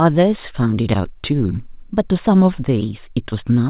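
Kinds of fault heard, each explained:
No faults can be heard in this speech recording. It has passed through a WebRTC call path that is working normally, and its narrow band with nothing above 4 kHz fits G.711 A-law at 64 kbps.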